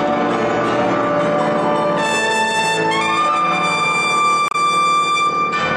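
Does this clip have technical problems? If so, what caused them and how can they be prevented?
Yes. Between 4.48 and 4.55 s there is damaged data in a compressed stream: for about 70 ms the decoder reads corrupted frames, produces a brief glitch, and recovers once it finds the next valid frame header. On a spectrogram this appears as a narrow vertical band of smeared energy breaking the surrounding pattern. The waveform shows an abrupt discontinuity. Checksummed storage and error-checked, retransmitting delivery would prevent the corruption from reaching the decoder.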